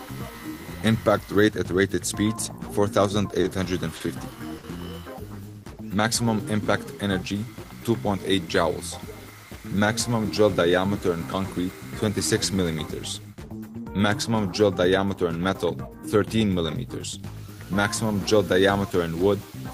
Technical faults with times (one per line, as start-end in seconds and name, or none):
3.40-3.46 short stall from a late packet
3.96-4.02 short stall from a late packet
4.58-4.65 short stall from a late packet